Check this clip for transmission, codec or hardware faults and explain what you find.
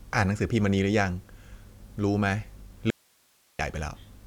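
One fault appears. At 2.90–3.59 s, an audio dropout to a faint residue: the speech abruptly gives way to hiss about 40 dB down, likely from a lost signal with the path still live. The waveform flattens and the spectrogram shows only faint noise.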